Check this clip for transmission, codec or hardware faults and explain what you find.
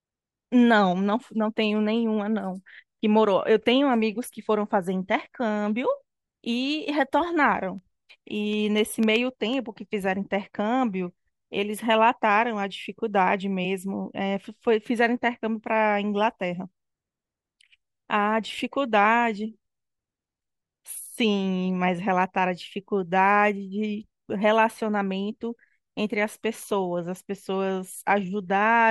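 One hardware-side fault is present in this speech recording, periodic USB or driver dropouts, between 7.78 s and 9.66 s. Something is stalling the USB bus or the audio driver every 0.125 s, eight times a second, and each stall loses a tiny fraction of a millisecond of audio, filled with silence. Around fifteen gaps occur in that stretch. Each gap breaks the waveform abruptly, so the speech carries a steady train of ticks at that fixed rhythm, audible only while the voice is present.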